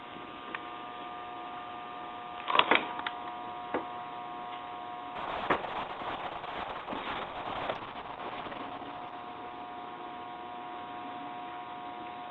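From 5.17 s to the end there's a call bitrate drop. The sound gets coarse and watery, and the top end collapses: the band that reached up to 12 kHz now stops at about 6 kHz, so everything turns muffled. That fits the call's bandwidth estimate crashing and Opus being pushed from around 32 kbps down to roughly 6 kbps. It sits at its worst for about 3.46 s and never recovers before the clip ends.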